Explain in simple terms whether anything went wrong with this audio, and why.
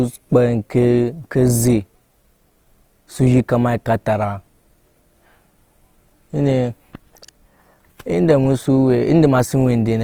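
Throughout the recording, the speech sounds rough and grainy, as if fine sand were mixed into it. That points to Opus compression, likely the cause. When the file was squeezed small, detail got filled in with noise instead of kept accurately.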